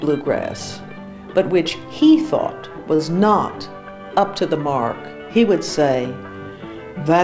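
At 2.96 to 3.01 s, a short stall from a late packet: the jitter buffer ran empty and the receiver stretched the last sound for 26 ms, a brief held moment with a slight buzz or dip. Unlike packet loss, nothing is skipped, and playback resumes from the same point, 26 ms later.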